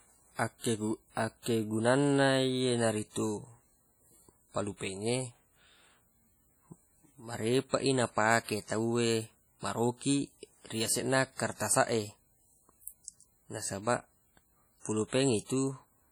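A speech recording runs throughout with a ringing, washy character and a hiss that rises and falls with the voice. This heavy damage is most likely WMA compression, consistent with the first version of Windows Media Audio at a setting that fits about 32 kbps. The transform codec spreads its quantisation noise across long blocks of tens of milliseconds and discards weak spectral detail, leaving that swirling texture, although energy still reaches up to about 20.1 kHz. At 1.42 to 1.46 s a short hiss arrives just ahead of a sharp onset, softening its attack. This is pre-echo, spread over 39 ms: the attack fell late in a coding block, and the noise sized for the loud moment was spread evenly across the whole block, filling the quiet gap before it.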